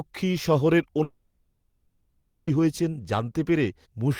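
A long network dropout runs from 1.03 s to 2.50 s in this speech clip, almost 1.5 s of missing audio. The gap is most likely due to packets that stopped reaching the receiver. Concealment stretched the last sound into a fading buzz for about 1.44 s, leaving only a brief 40 ms of silence before the speech resumed at 2.50 s. The lost section never returns; the talk simply picks up further along.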